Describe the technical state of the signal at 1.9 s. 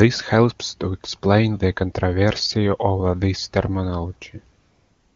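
At 1.9 s the speech is intact, with the wideband AMR-WB coding at its top rate of 23.85 kbit/s leaving no fault at that moment.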